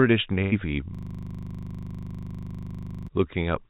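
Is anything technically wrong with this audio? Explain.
Yes, two faults. From 0.42 to 0.54 s a burst of packet loss: about 100 ms never arrived, the receiver stretched the last sound into a fading fill, and the speech resumes further on. Unlike a dropout, it sounds smeared rather than silent. From 0.95 to 3.08 s a system hang loop: one 40 ms piece repeats 53 times, giving a steady 25 Hz stutter instead of new, lost sound. Throughout, the speech is band-limited to 4 kHz, which fits a telephone-style call codec.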